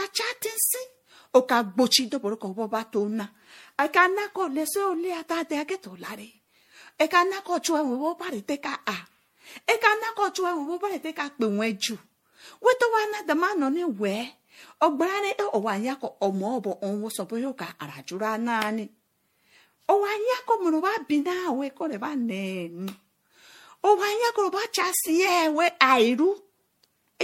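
From start to finish the speech has a swirly, watery texture, with hollow, smeared consonants and blurred attacks, and nothing above 16.5 kHz. This is generation loss, likely from repeated MP3 encoding, around seven passes, at a rate that fits 64 kbit/s. Each re-encode quantises on a shifted frame grid, so the artefacts pile up. A single 64 kbit/s encode would sound cleaner. Here the hollowness and swirl run deeper than that bitrate alone explains.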